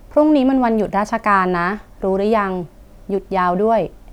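No technical faults are audible.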